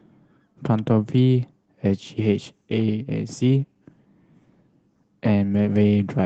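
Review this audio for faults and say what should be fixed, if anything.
Nothing in this speech needs to be fixed, as no faults turn up in it.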